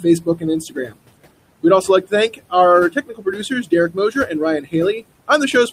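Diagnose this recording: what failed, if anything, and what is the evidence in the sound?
The background drops by about 21 dB between phrases and swells back under the speech. These are noise suppressor artifacts from the call-processing stage. Frame-by-frame band gains pull down whatever is judged steady noise, here room noise sitting about 17 dB below the speech.

Stretches of speech sound swallowed and faint at 0.00–0.44, 0.61–1.00, 2.29–2.53, 2.90–3.72, 3.89–4.30 and 4.61–4.74 s, dipping by about 15 to 22 dB. This is speech cut by the noise suppressor, also in call processing. Quiet speech energy was misread as noise and turned down with the background.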